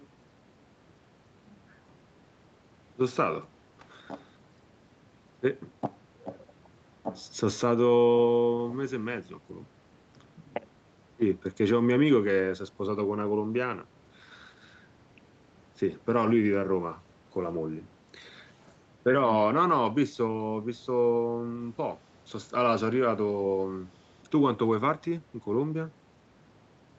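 No technical faults can be heard in this speech.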